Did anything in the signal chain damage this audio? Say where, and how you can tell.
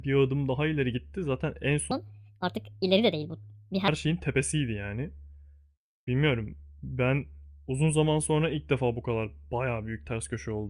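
Yes. From 1.91 s to 3.88 s the speech jumps up in pitch and rushes forward, then drops back to normal. That is a wrong sample rate fault at the playback stage. Speed and pitch rise together, by about 1.45 times and roughly 6.5 semitones. No time-stretching is involved. The ratio fits material recorded at 22 kHz being clocked out at 32 kHz without any conversion.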